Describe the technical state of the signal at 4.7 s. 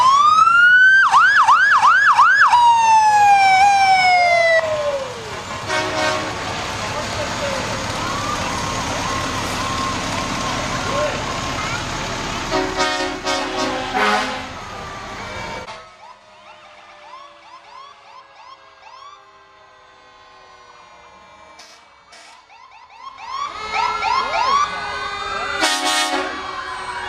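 At 4.7 s the signal is intact, with no technical fault to be heard at that moment.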